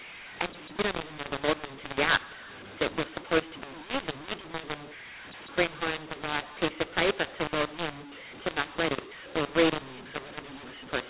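From start to finish, speech encoded with G.711 A-law is decoded as mu-law, a case of mu-law and A-law mixed up. Each level is misread, so the voice turns harsh and distorted, loud and soft parts come out scrambled, and pauses fill with noise.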